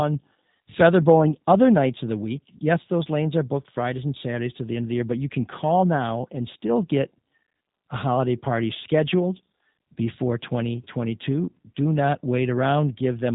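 From start to finish the speech carries plainly audible G.729 codec damage, the sound of a low-rate VoIP link, which fits roughly 8 kbit/s. Everything above 4 kHz is missing, so the top end sounds dull and muffled. The voice is rebuilt from a compact vocal tract model, a pitch predictor and a few pulses per 10 ms frame rather than the original waveform, which gives it a rough, slightly synthetic texture.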